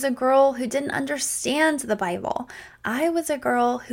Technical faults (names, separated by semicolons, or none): none